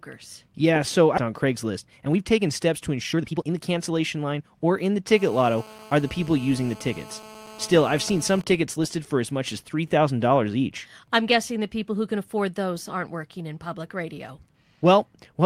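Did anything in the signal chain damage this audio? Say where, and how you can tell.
Yes. The network or jitter-buffer stage dropped audio at 1.17 to 1.19 s. This is a skip ahead: roughly 1.5 s of speech is gone and nothing fills it, so the two sides are butted together. On a waveform and spectrogram it shows as an abrupt seam with no silent gap and a sudden change in formants.

Right after, from 1.27 to 4.65 s, a jitter buffer speed-up runs, ending before "in the". The receiver trimmed pitch periods repeatedly, shedding around 0.7 s, so the speech runs at 123% speed with unchanged pitch. A spectrogram shows compressed syllables while the harmonic spacing stays the same.

From 5.13 to 8.37 s, after "in the", there is GSM phone buzz. A nearby 2G handset in a call is being rectified in the analogue wiring, producing a raspy 217 Hz buzz about 21 dB below the speech. The spectrogram shows a dense comb of 217 Hz harmonics, and the waveform shows regular pulse spikes.

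From 8.38 to 11.20 s, before "guessing the people who", there are GSM signalling bursts. The phone is still in the call but its talker is silent, so it transmits only intermittent burst groups. You hear even ticks with a longer 217 Hz buzz twice a second, about 30 dB down. These appear as clustered vertical striations on the spectrogram.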